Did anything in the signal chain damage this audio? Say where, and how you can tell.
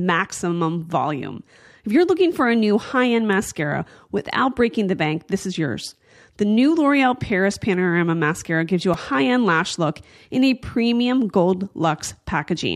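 Yes, a repeated buffer at 8.94 s in the driver stage: a 1.45 ms slice, fitting a 64-sample buffer, replays as a click or brief buzz, losing about 5 ms.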